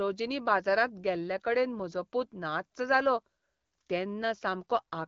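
Nothing stood out on listening to the speech in this recording.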